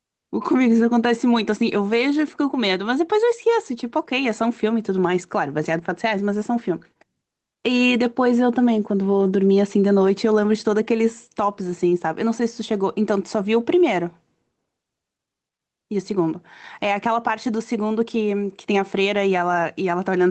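Gain pumping runs through the whole clip: the level swings by around 5 dB, pulled down under every loud passage, likely from gain set far too high feeding a fast limiter. Unlike a noise gate, the quiet gaps are never cut to silence.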